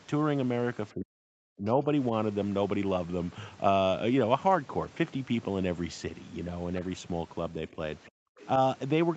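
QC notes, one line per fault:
0.94–1.87 s, 7.71–7.78 s, 8.09–8.38 s: speech suppressed in double talk. The talker's level collapses by about 40 dB in the first and third spans, over about 0.7 s and 0.3 s. At 7.71–7.78 s it is a shallow dip of about 5 dB. This is likely an echo canceller meeting simultaneous far-end speech, failing to tell the local talker from loudspeaker echo, and attenuating everything.
8.40–8.47 s: other side's voice leaking through. Immediately after the last suppression releases, a brief scrap of a second voice sits about 25 dB under the talker within the 8 kHz call bandwidth. It is likely residual loudspeaker echo that the canceller left in the microphone signal as it stopped suppressing, so a short fragment slips through.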